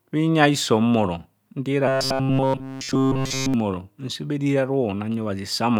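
From 1.88 to 3.54 s, robotic sound from repeated short buffers. The speech becomes a rigid metallic buzz at 133 Hz, just before "nse bha eriri". Likely cause: one roughly 7.5 ms buffer replayed over and over.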